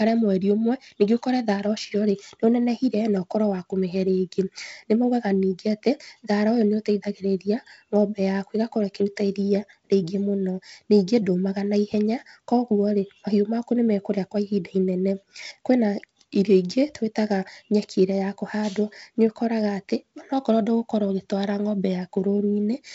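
The speech carries no audible technical faults.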